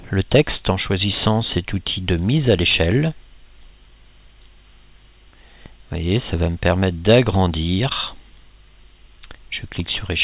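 There are no technical faults to describe, as the sound carries the narrow, telephone-like band of a call path with nothing above 4 kHz, which fits G.711 mu-law at 64 kbps.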